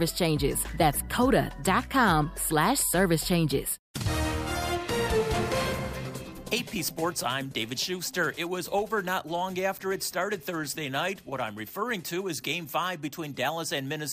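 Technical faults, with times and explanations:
No technical faults can be heard anywhere in this audio.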